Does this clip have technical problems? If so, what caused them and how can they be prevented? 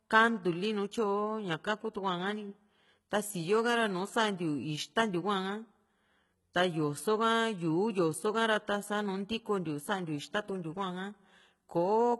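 Yes. Throughout the speech, the treble sounds bright but synthetic, and s sounds come out gritty, metallic and lispy, with heavy damage across the whole recording. The likely cause is HE-AAC compression, and the harshness fits a very low bitrate around 16 kbps. At that rate only the lower spectrum is truly coded, and the upper band is rebuilt by copying lower content upward under a coarse envelope, so its harmonics no longer match the real ones. To prevent this, encode speech at a higher bitrate with plain AAC-LC or Opus instead of HE-AAC v2.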